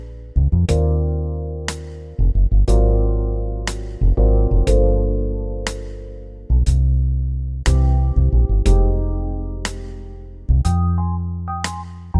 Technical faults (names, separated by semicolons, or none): none